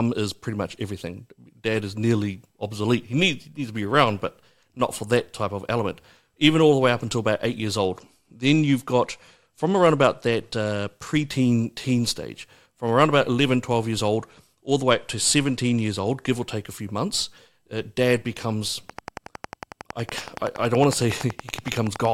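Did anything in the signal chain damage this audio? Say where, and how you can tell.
Yes. A Bluetooth SBC bit pool drop at the codec stage, from 7.80 to 11.28 s (after "until about eight years", before "teen stage from around") and from 14.12 to 16.28 s (before "or take a few"), dulls the treble and adds gritty noise. The spectrogram's upper bands empty abruptly, which fits a bit pool falling from 31 to 15, around 105 kbps.

A train of clicks runs from 18.90 to 22.06 s, after "months uh dad becomes": some forty near-identical ticks at a regular 10.8 per second, peaking about 10 dB above the speech. The waveform shows evenly spaced spikes and the spectrogram shows vertical lines, likely from interference in the analogue wiring or interface.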